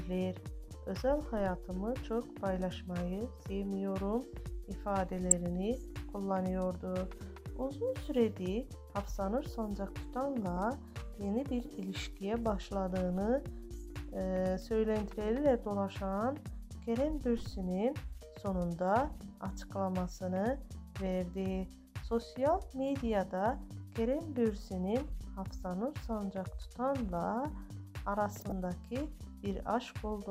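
DAB burbling appears at 5.31 s, again at 10.57 s, and again from 28.40 to 28.52 s. Weak reception let bit errors, at a rate of a fraction of a percent, slip past error correction into the MP2 stream. Corrupted samples then put short blips of noise into individual sub-bands. Each event is short, and the longest, near the end, fits about ten damaged frames.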